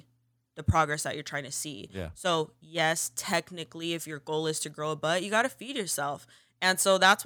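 Nothing stood out as a technical fault on listening to this speech recording.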